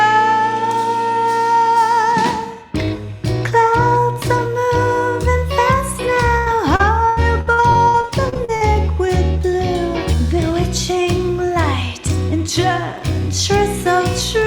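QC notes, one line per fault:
6.37–8.77 s, repeated packet loss (robotic sound): over these 2.4 seconds the audio breaks into more than a dozen short holes, the longest about 86 ms. Each is patched by extending the preceding sound, so about a quarter of the span is smeared continuation, and about 0.6 s of sound is simply missing. The rapid recurrence of filled gaps distinguishes it from a single dropout or steady distortion.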